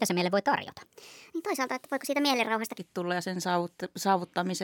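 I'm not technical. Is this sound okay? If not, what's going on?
No. From the start to 2.78 s the speech sounds high and rushed, a section at the wrong speed: about 1.31 times too fast, likely from playback on a mismatched clock.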